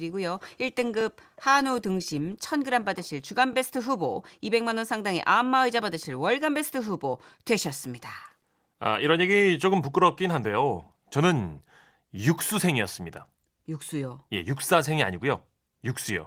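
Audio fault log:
1.01, 3.53 and 6.05 s: overlapping chunks. Each 2.5 s chunk starts 20 ms early, so that slice of speech repeats, heard as a brief stutter.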